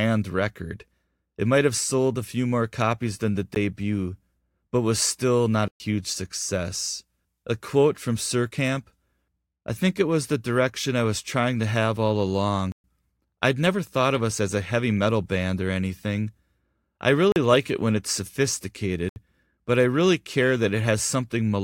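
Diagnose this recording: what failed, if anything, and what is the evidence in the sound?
Blocks of digital silence at the driver or buffer stage: the audio cuts out with no fade at 3.55 s (a bare tick), 5.68–5.80 s after "but was still not", 12.72–12.84 s, 17.32–17.36 s before "like it when it's", and 19.09–19.16 s. Unfilled output buffers are the usual cause.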